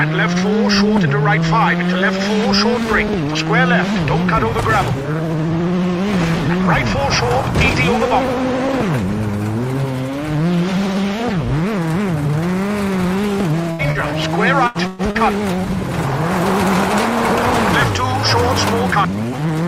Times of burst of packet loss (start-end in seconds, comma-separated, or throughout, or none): 13.71-13.82, 14.67-15.02